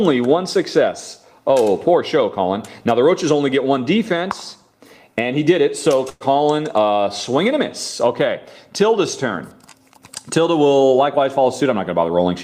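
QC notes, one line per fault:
6.09–6.23 s, call audio freeze: the sound stalls and the last fragment is stretched into a fading buzz for about 112 ms, then about 20 ms of silence before it resumes where it stopped. Likely late packets emptying the jitter buffer; nothing is lost, but the audio now trails by about 112 ms.
11.17–12.29 s, jitter buffer speed-up: playback runs at 109% speed with unchanged pitch and sounds hurried. Short pitch-period pieces are repeatedly cut out, removing about a tenth of a second in total, as the receiver drains the surplus buffered audio to reduce delay.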